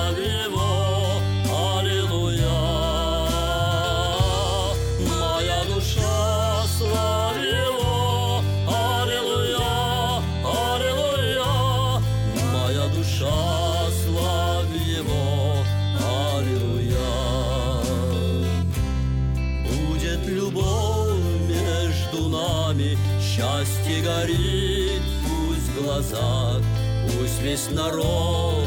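Nothing in the audio stood out as a technical problem on listening.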